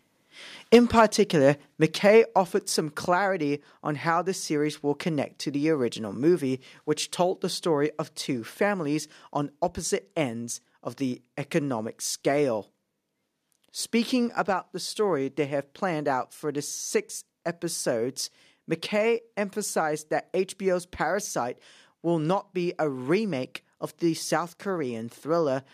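Speech clip, with faults in three areas. Two devices running on unsynchronised clocks, likely, leave single-sample slips at a steady interval of roughly 0.15 s, from 0.10 s to 25.6 s. That fits clocks drifting apart by something like 150 parts per million, and it is heard as faint regular clock slip clicks, a soft ticking under the loud sustained parts of the speech. Microphone overload, with an input level likely set too high, drives peaks about 7 dB past the converter's limit between 0.73 and 1.01 s. The flattened waveform tops put a harsh, crackling edge on those loudest syllables. In response, the call software likely stepped the microphone volume down four times, each a sudden drop in both voice and background level: about 2 dB at 0.75 s, about 4 dB at 1.74 s, about 4 dB at 2.76 s, and about 2 dB at 7.86 s.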